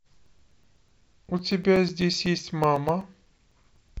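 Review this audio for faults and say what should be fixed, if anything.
Periodic USB or driver dropouts tick through the speech every 0.125 s from 0.13 to 3.89 s, as a blocked bus or driver replaces roughly 4 ms with silence. Fix this by finding and stopping the background task that stalls the USB audio path, or by raising the driver buffer size.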